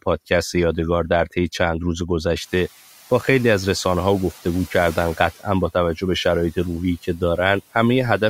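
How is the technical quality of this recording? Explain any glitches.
The recording has two noise-suppression glitches. The room noise jumps by about 19 dB near 2.5 s and then sits about 23 dB below the speech.

Noise suppressor catching up, 2.4 to 2.69 s: the suppressor's noise estimate lags the sudden rise, so the louder background leaks through before being pulled down about 7 dB over 290 ms.

Speech cut by the noise suppressor, 7.03 to 7.38 s: the suppressor mistakes parts of the speech for noise, turning them down by up to about 8 dB, so roughly a tenth of a second sounds swallowed and faint.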